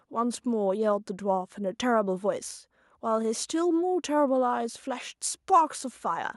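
Nothing technical stands out in this bit of speech, so there's no fault to point to anywhere in it.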